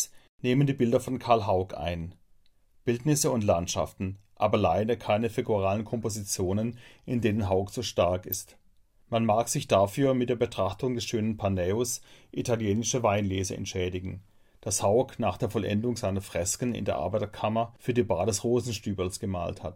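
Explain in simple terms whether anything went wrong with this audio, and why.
A corrupt frame was decoded twice: damaged data was played anyway, causing a brief squeak at 8.32 to 8.35 s after "so stark" and a blip at 10.06 s between "mag sich" and "mit der".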